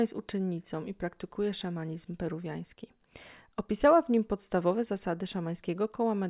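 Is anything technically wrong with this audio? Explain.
No, nothing technically wrong can be heard in this speech recording. It carries no audible fault at any point.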